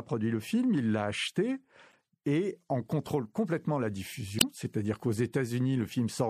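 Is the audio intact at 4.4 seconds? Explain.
No. From 4.38 to 4.43 s there is damaged data in the compressed stream. The decoder misreads or rejects frames it cannot parse, loses sync and hunts for the next header, producing a brief glitch.

Across the whole speech clip, including that moment, the sound is plainly watery and swirly, with chirpy s sounds. The likely cause is MP3 compression at a low rate, which fits about 64 kbps. It is steady throughout, unlike the isolated glitch.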